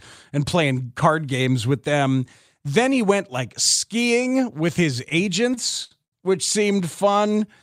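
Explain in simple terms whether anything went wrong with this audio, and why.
Short stalls from late packets: three packets arrived late, so the speech is briefly held and stretched at 5.54–5.58 s, 5.84–5.93 s and 6.05–6.14 s, each up to about 0.07 s.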